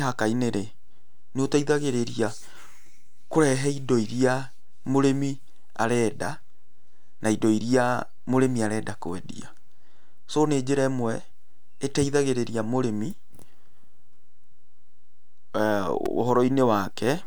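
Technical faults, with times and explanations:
Throughout, DC offset: a constant shift somewhere in the recording or conversion chain has moved the entire speech waveform off the zero line. The offset itself makes no audible tone, but it shows up as steady energy right at the bottom of the spectrum and eats into headroom, so peaks on one side of the waveform reach full scale sooner than they should, leaving less margin before clipping.
16.06 s, repeated buffer: fresh audio failed to reach the playback device in time, so it replayed the block it already held, a piece about 2.67 ms long, which fits a 128-sample buffer, sounding three extra times in a row. Each repeat meets the next with a hard join, and because the block is so short the result is a brief click or buzz rather than an audible stutter. Essentially no audio is lost.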